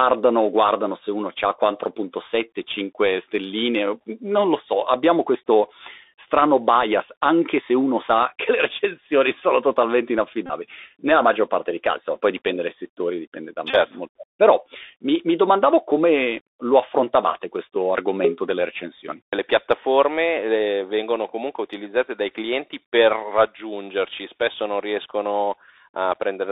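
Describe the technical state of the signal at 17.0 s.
At 17.0 s the speech carries the Bluetooth CVSD headset codec, present throughout the clip. Each sample is one up-or-down bit with an adapting step. The band runs about 300 Hz to 3.7 kHz, so it sounds narrow, with gritty sibilants and granular hiss.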